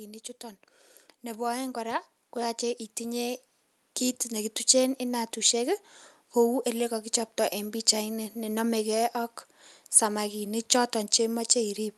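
Automatic gain rising runs from 1.23 s to 5.28 s. The gain control judged the incoming level too low and pushed its gain up step by step, about 9 dB over roughly four seconds. Because the boost acts on the whole signal, the speech and the background noise beneath it swell together, so the room seems to creep closer as the level climbs, with the call path's top end stopping near 12 kHz throughout.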